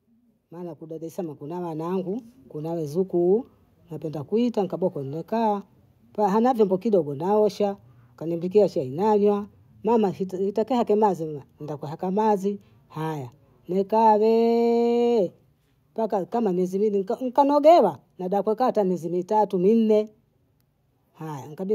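Automatic gain rising runs from 0.48 to 5.31 s. The gain control judged the incoming speech too quiet and turned itself up by about 11 dB over nearly five seconds, so the voice and the room noise behind it swell together in a slow, steady climb.

Automatic gain falling follows from 13.93 to 17.93 s, ending just before "nada kukaa hata mezi". Having judged the level too high, the control eased back by about 3 dB, and speech and background sink together gently over four seconds.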